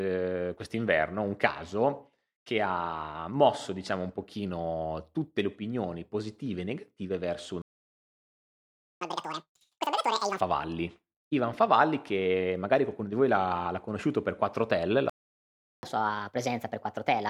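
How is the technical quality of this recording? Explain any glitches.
The recording is marred by two interruptions, each followed by a sped-up stretch, so the flow of the speech is broken twice.

Playback stall, at 7.62 to 9.01 s (about 1.39 s, right after "e negative verso un") and at 15.10 to 15.83 s (about 0.73 s): the output simply goes silent mid-phrase. The likely cause is the player running out of buffered data or its thread being blocked. Unlike a dropout from packet loss, which clips a few milliseconds, these gaps last long enough to hear as a hang.

Catch-up at higher speed follows each stall. From 9.01 to 10.41 s the speech plays at double speed, its pitch jumping close to an octave, and from 15.83 s to the end it runs at 1.25× speed, a few semitones sharp. The player is resampling its backlog to regain the lost time. Because speed and pitch rise together, it sounds like a chipmunk effect rather than a tempo change that keeps the pitch.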